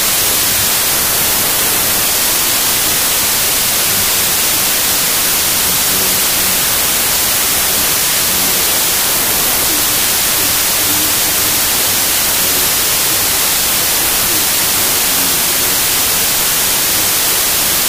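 From the first moment to the end, the clip suffers from a wrong sample width. The data were written as 32-bit integers but read as packed 24-bit ones. Each value is assembled from the wrong group of bytes, so the framing drifts across every sample. Only some values keep the signal's top bits. The result is loud, harsh noise with the real sound buried beneath it. Everything plays at 0.75 times speed, so pitch drops too.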